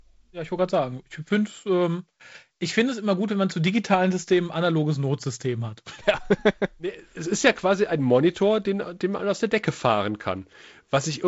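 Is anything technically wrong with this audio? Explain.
No, nothing here is actually wrong; it's just speech carried over G.722 wideband telephone coding at 48 kbit/s, so there's nothing above about 7.7 kHz and a touch of the light graininess that coding brings, which is what you'd expect from that kind of line.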